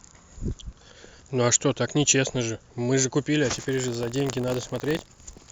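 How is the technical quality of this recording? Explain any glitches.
The recording has one fault near the end. From 3.52 s to the end, buffer tearing adds a steady robotic buzz at about 47 Hz, which fits a 1024-sample buffer. Writer and reader cross each period, splicing in a small slice of audio about 40 ms old. Unlike random clicks, it repeats regularly and is heard only while speech is present.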